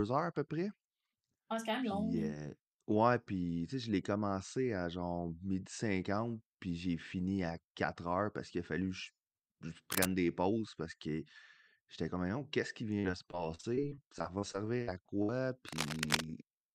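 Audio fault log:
9.92–10.09 s and 15.68–16.24 s, cable scratch noise: dense, irregular crackling bursts at about the level of the speech, the first ending just before "des pauses parce que". The likely cause is a worn connector being moved. On a spectrogram it shows as broadband vertical smears, and on the waveform as ragged spikes.
12.99–15.30 s, repeated packet loss (robotic sound): starting after "qui vient", the audio turns choppy, with pieces missing. Repeated short holes, the longest about 62 ms, are each patched by stretching the preceding sound, so about a fifth of the span is concealed. A spectrogram shows frozen, smeared harmonic bands and small breaks.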